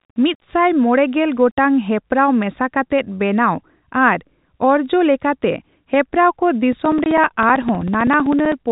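From 0.00 to 1.93 s, low bit depth without dither, likely from rounding to roughly 9 bits, leaves grainy distortion about 40 dB under the speech that shifts with its level. From 6.73 to 8.65 s, periodic USB or driver dropouts blank roughly 4 ms of audio every 64 ms, about thirty times, giving evenly spaced ticks over the speech. From 7.04 to 7.06 s, one lost packet filled with silence punches a 20 ms hole with hard edges.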